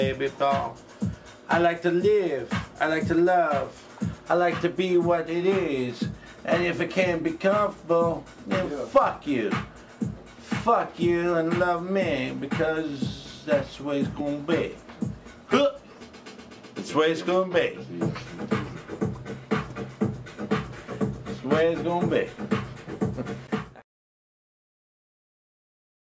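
No technical faults can be heard in this audio.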